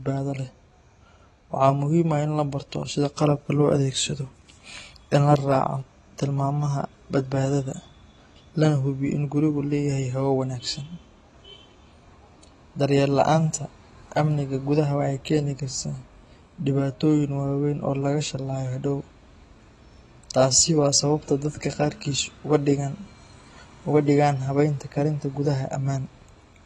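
Throughout the speech, the signal has likely passed through AAC compression at a low bitrate, fitting AAC-LC at 32 kbps, which quantises each frame coarsely and discards everything above 12 kHz. The damage is plainly audible: dull, smeared speech with warbling, fizzy sibilants.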